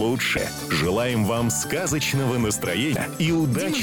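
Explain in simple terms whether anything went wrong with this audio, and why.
Two short glitches cut into the sound, from 0.34 to 0.38 s and again from 2.93 to 2.96 s. This is damaged data in a compressed stream. A bit of the compressed file was corrupted, so the player briefly misread it and had to find its place again.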